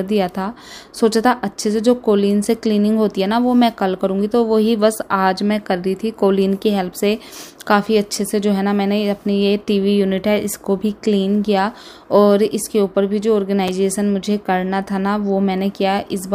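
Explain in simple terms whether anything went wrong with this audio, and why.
Something did go wrong, once, at about 13.68 seconds. This is a fault called chunks out of order. Audio travels in tiny pieces, here each about 6 milliseconds long. One piece arrived one step late, so it played after the piece that should have followed it. No sound is lost, only shuffled. The swap creates hard joins where the pieces meet. You hear a very brief jumbled blip.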